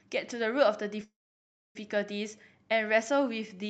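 From 1.04 s to 1.77 s the speech stops dead: a brief fading buzz carries on the last sound, then about 0.63 s of silence, and the talk resumes exactly where it broke off with nothing skipped. This is a call audio freeze, likely caused by packets stalling in transit so the jitter buffer emptied. The receiver filled roughly 0.71 s of waiting with that concealment tail and silence, pushing everything after it later by the same amount.

From 2.96 s to 3.69 s the speech drags at unchanged pitch, with stretched sounds running at about 92% speed. This is a jitter buffer slow-down: to build up a reserve, the receiver repeated single pitch periods and slivers of pauses over and over, adding about 62 ms to that stretch. Throughout, the call path's Opus coding noise and its cut-off above 8 kHz can be heard.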